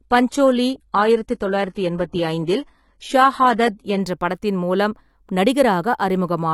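Speech, opening with an adaptive stream starting at a low bitrate. From 0.0 to 4.0 s the treble sounds synthetic, with nothing above 11.8 kHz and strong codec artefacts. That fits a low-rate HE-AAC stream. At 4.0 s, just before "படத்தின் மூலம்", quality jumps with no gap.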